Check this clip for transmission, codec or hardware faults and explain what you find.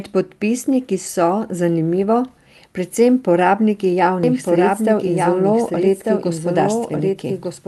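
One transmission fault stands out: a doubled audio track runs from 4.23 s, just after "predvsem porabniki", to the end of the clip. From that point a second full-band copy of the speech plays about a second behind the original and roughly 5 dB quieter. The likely cause is the same signal being captured again through a slower path, or an edit holding two copies out of step. What separates this from acoustic echo or reverb is that the copy has no decay tail and no room colouring. It is a single clean repeat that cuts in abruptly instead of building up. The band above roughly 12 kHz is absent, consistent with the Opus call codec's bandwidth setting.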